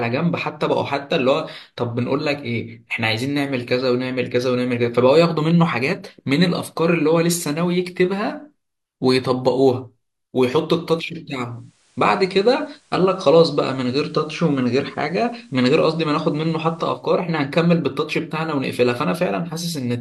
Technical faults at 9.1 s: none

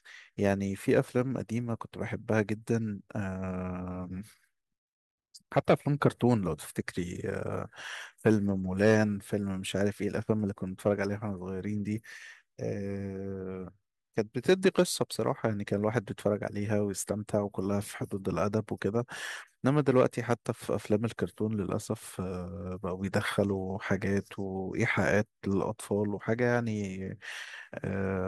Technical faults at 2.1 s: none

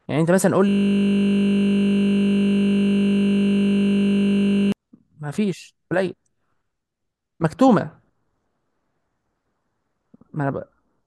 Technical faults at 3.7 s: system hang loop

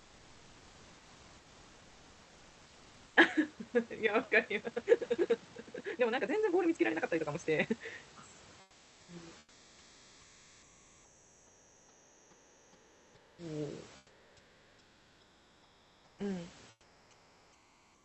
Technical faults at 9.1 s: comfort noise in place of the background; onset clipped by the voice detector

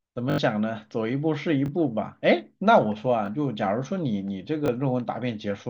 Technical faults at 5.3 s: none

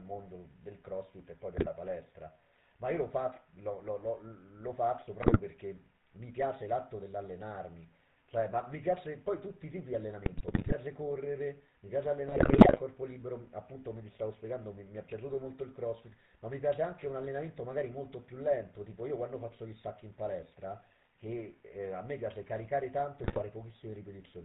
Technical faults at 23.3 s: GSM full-rate codec; GSM bit errors

